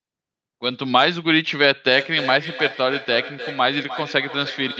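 Two devices in the same room were joined to one call, so one loudspeaker replayed the other's microphone feed back into that microphone, and neither echo canceller could remove sound its own device hadn't played. From 1.97 s to the end of this speech recording, the feedback echo between two devices brings each phrase back roughly every third of a second, thinner and more ringing each pass, peaking at about 12 dB below the direct speech, all heard through a call codec band-limited near 8 kHz.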